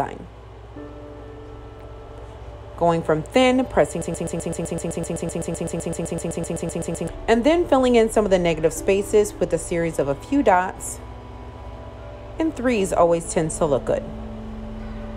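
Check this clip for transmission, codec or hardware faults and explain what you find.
One fault is present: a broken-record loop from 4.02 to 7.08 s. A 0.13 s fragment repeats exactly, back to back, 24 times. The likely cause is a stall that kept resending the last held fragment. The audio meant for that span is lost.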